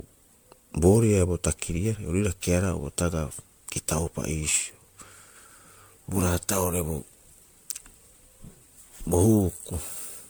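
Generation loss runs through the whole clip: the speech sounds swirly, smeared and hollow, attacks blur, and nothing remains above 19.9 kHz. It likely comes from roughly ten MP3 passes near 128 kbit/s, each requantising on a shifted frame grid, compounding noise and spectral gaps.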